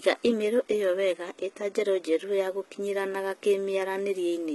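From start to finish, the top end sounds synthetic. There's nothing at all above about 11.8 kHz, and the treble below that is grainy, so the s sounds come out metallic and a bit lispy. That points to HE-AAC compression, likely at a very low rate, around 16 kbps. It codes only the lower band and patches in the highs by copying lower bands upward, so the upper harmonics don't line up with the real ones, and the damage here is heavy.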